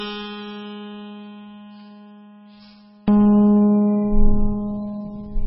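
From 0 to 3.08 s, one channel inverted is the likely cause: the shared centre cancels when summed to mono, dropping the music about 34 dB to a faint residue. Throughout, heavy MP3 compression is likely, with everything above 5.6 kHz cut and weak detail flickering into a watery swirl, which points to a bitrate near 16 kbps.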